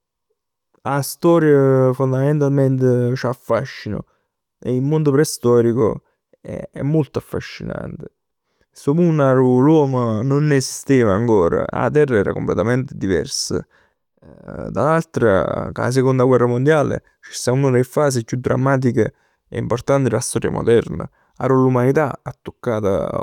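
Speech recording; no technical faults can be heard.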